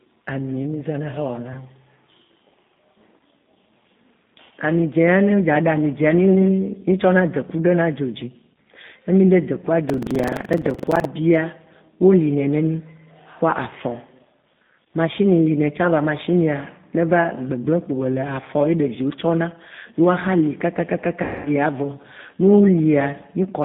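Throughout, the speech has been squeezed through the G.729 codec at 8 kbit/s, which rebuilds each 10 ms frame from a vocal-tract filter, a pitch predictor and a few pulses. The line passes only about 150 Hz to 3.6 kHz, so the speech sounds thin, slightly rough and synthetic.

From 9.86 to 11.08 s, buffer tearing sets in: the writer and the playback hardware have slipped, so each buffer mixes in a small slice of audio roughly 150 ms stale with hard joins. The result is a 23.4 Hz robotic rattle, which fits a 2048-sample buffer.

At 21.23 s, 220 ms of speech was lost in transit. The G.729 decoder covered the VoIP packet loss by extrapolating its last pitch and filter at falling gain, so the speech smears into a buzzy, fading tone that stays weak and distorted until about 21.5 s.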